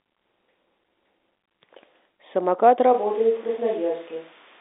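At 2.95 s the speech suddenly turns roomy and hollow, thinner in the bass and roughly 5 dB quieter, with background noise rising to around 25 dB below it. It stays that way to the end, which sounds like a likely switch to a distant microphone.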